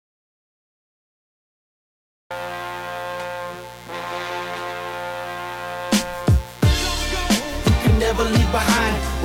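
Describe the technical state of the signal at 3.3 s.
At 3.3 s a steady, raspy buzz sits well beneath the music, present across the whole clip. It is mains buzz at 60 Hz: sharp switching spikes from a dimmer, rectifier or unshielded path arrive twice per cycle, spreading harmonics up into the kilohertz range.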